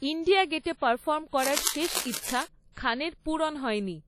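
From the start, the speech carries heavy codec damage with nothing above 18 kHz. Consonants ring and smear over tens of milliseconds, and a washy hiss rises and falls with the voice. This likely comes from WMA compression at a low bitrate, around 32 kbps, where long transform blocks spread quantisation noise in time and weak spectral lines drop out. Unlike a plain low-pass filter, it adds this breathing, smeared texture rather than just dulling the top end.

From 1.43 to 2.44 s, dense, uneven bursts of scratching and rustling sit on top of the speech, only a few decibels below it. This is cable scratch noise, likely from a worn cable, connector or control carrying DC whose contact resistance jumped around as it moved. Unlike isolated clicks or steady crackle, it arrives as one continuous ragged stretch lasting about a second, then stops.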